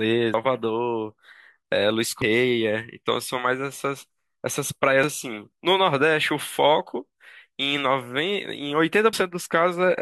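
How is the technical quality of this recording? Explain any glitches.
The speech jumps abruptly four times, at 0.34, 2.22, 5.04 and 9.13 s. Each jump comes with no pause, as if a slice of sound had been cut out. The first skip loses around a third of a second, the second about half that, and the last two roughly a tenth of a second each. The likely cause is a dropped buffer (overrun): the audio wasn't read out before the hardware overwrote it, so the sound on either side was joined directly together.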